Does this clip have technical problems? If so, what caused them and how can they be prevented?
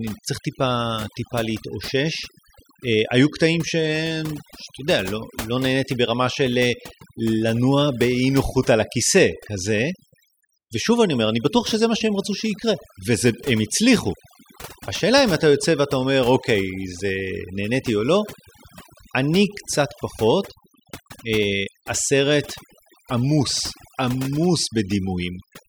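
Yes. Overdone noise removal runs throughout the speech: the suppressor pulls individual frequency bands toward silence wherever they resemble its noise estimate, leaving twinkling specks in the background and taking quiet parts of the voice with them. Unlike gating, whole passages never switch off. Set reduction strength lower and preserve some noise floor.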